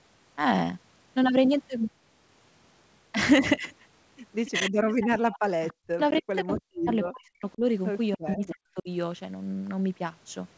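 At 4.45 to 4.51 s a brief echo leak appears: a faint copy of the speech returns 288 ms late, about 20 dB below the direct voice, most likely because a loudspeaker on the far side fed the sound back into its microphone and the echo canceller did not remove all of it. More echo follows from 5.31 to 6.17 s, then short scraps at 7.05 to 7.1 s and 8.47 to 8.54 s. The last is stronger, about 15 dB below the speech. On a spectrogram these show as weak, smeared repeats of the preceding speech harmonics, offset by a fixed 288 ms. In the waveform they are low ripples trailing the main bursts.

Overlapping these, speech suppressed in double talk pulls the voice down from 4.5 to 5.19 s, from 5.91 to 7.62 s and from 8.17 to 8.9 s. The canceller likely heard both sides at once and attenuated everything, with drops as deep as about 40 dB. The talker fades or chops out in pieces, about half a second of it in the first and last stretches and about a second in the middle. 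The waveform shows the envelope collapsing in notches. On the spectrogram, whole columns go dark and the upper band, which already ends at 8 kHz, thins.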